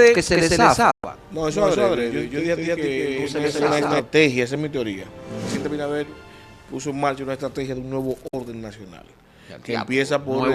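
A doubled audio track runs from the very start to 4.0 s. A second full-band copy of the sound trails the original by roughly a fifth of a second at about the same loudness, giving a dry, stuttering echo with no decay or room colour. It is likely caused by the signal being captured twice, once through a slower path. At 4.0 s the trailing copy stops abruptly.

Within that stretch, a digital broadcast dropout cuts the audio from 0.91 to 1.04 s. The receiver stopped getting valid data and muted, fading to silence over about 8 ms, leaving a 120 ms hole. That length fits five lost frames, and whatever was sent during the gap is gone. A second, shorter dropout follows from 8.27 to 8.34 s, with the same quick fade and a 48 ms silence, which points to two lost frames.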